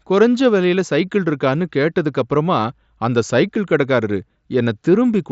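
No technical faults are audible.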